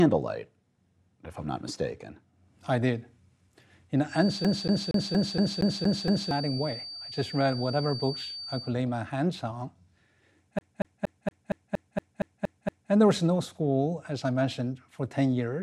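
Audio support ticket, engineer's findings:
Feedback whistle, 4.05 to 8.76 s. Thin steady tone at 4.6 kHz, well below the programme level, swelling and fading slowly in level. Likely speaker-to-mic acoustic loop held just at the gain limit: one frequency sustains without building into runaway howl.

CD stuck on one turn, 4.44 to 6.31 s (8 repeats) and 10.59 to 12.92 s (10 repeats). The same 233 ms segment replays with a brief mute at each jump, giving an even, fast stutter. Disc defect is throwing the laser back one track every revolution. The first event overlaps the whistle.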